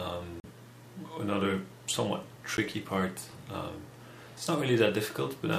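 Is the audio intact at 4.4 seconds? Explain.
Yes, the audio is intact at 4.4 seconds, with no fault at that moment.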